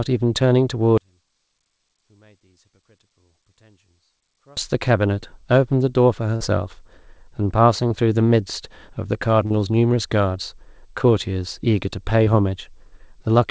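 From 0.98 to 4.57 s the speech collapses to a faint residue, roughly 36 dB quieter than the surrounding audio. This is likely one channel inverted: with one stereo side's polarity flipped, the shared centre content cancels when the two are summed to mono.

Brief smears or wobbles then interrupt the speech at 6.36–6.42 s, 7.88–7.92 s, 9.46–9.52 s and 12.24–12.28 s. Each is a short concealed packet loss. Roughly 20 to 40 ms of audio failed to arrive, and the receiver bridged the gap with about 44, 19, 40 and 19 ms of extrapolated sound. That happens within the call path, whose band stops at 8 kHz, which fits a G.722 wideband codec.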